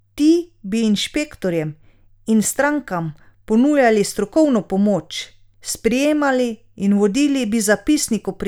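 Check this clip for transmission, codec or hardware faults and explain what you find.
Nothing wrong can be heard anywhere in this speech.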